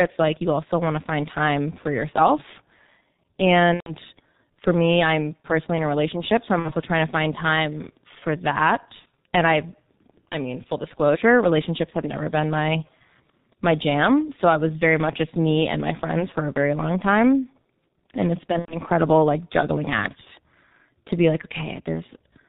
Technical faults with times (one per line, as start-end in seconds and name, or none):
0.00-22.49 G.723.1 codec
3.74-3.95 VoIP packet loss concealed by the speech codec
6.59-6.74 VoIP packet loss concealed by the speech codec
8.99-9.06 VoIP packet loss concealed by the speech codec
18.59-18.78 VoIP packet loss concealed by the speech codec